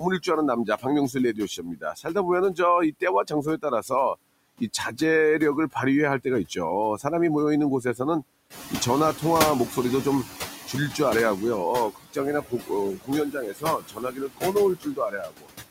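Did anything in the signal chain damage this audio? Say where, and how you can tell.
Yes. The damage comes from call processing, specifically the noise suppressor, in three related ways.

Noise suppressor artifacts run through the whole clip. The suppressor pulls down the background by about 19 dB, frame by frame and band by band. Between phrases the floor drops away, and under the speech it swells back. On a spectrogram the noise floor shows as a mottled, blotchy texture that brightens wherever speech energy appears, rather than a smooth, even wash.

Speech cut by the noise suppressor occurs in four stretches: 0.0–5.01 s, 5.73–7.05 s, 7.82–9.77 s and 11.91–15.51 s. Parts of the speech were treated as noise and turned down with it, by up to about 20, 14, 13 and 22 dB respectively. The first and last stretches lose the most, roughly 1.5 s and 2 s of material. Soft consonants and endings sound swallowed. 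The waveform shows syllable tails clipped into the floor, and the spectrogram shows weak high-frequency consonant streaks missing.

Noise suppressor catching up runs from 8.5 to 11.52 s. The room noise jumps by about 12 dB at roughly 8.5 s and afterward sits about 10 dB below the speech. The suppressor's estimate lags, so the louder noise first passes with less reduction. It then sinks over about 3 s to a cut of about 13 dB. On the spectrogram the broadband floor brightens abruptly, then fades gradually.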